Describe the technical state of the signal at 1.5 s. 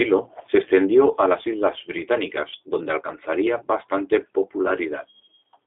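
At 1.5 s, as throughout, a G.729 codec rebuilds the speech from a compact filter-and-pulse model, consistent with 8 kbit/s, so the speech sounds rough, synthetic and confined to 300 Hz to 3.6 kHz.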